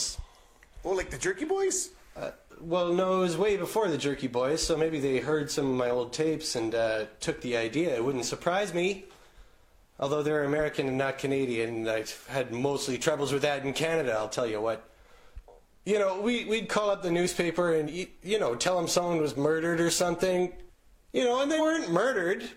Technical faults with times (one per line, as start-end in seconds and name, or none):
10.55-10.60 damaged data in a compressed stream
17.84-17.89 damaged data in a compressed stream
21.55-21.61 damaged data in a compressed stream